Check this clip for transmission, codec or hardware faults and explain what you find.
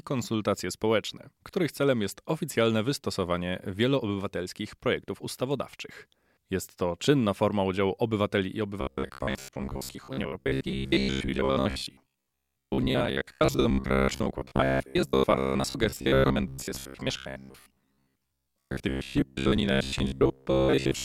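One fault is present: robotic sound from repeated short buffers, running from 8.81 s to the end of the clip. The speech turns into a rigid, metallic buzz at about 66.8 Hz that follows the original only loosely. The likely cause is audio arriving too seldom, so the player keeps repeating the last short segment, roughly 15 ms long, for most of the time while real audio is skipped. On a spectrogram this shows as evenly spaced horizontal harmonics of 66.8 Hz; the waveform shows a near-identical short cycle recurring.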